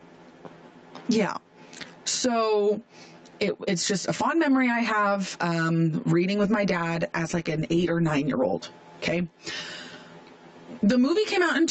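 All through the speech, channel delay comb filtering makes it sound hollow and phasey: one channel trails by around 10 ms, notching the spectrum evenly from near 40 Hz. Gain pumping runs throughout as well, with the gain swinging about 15 dB, likely a fast limiter reining in far-too-high input gain.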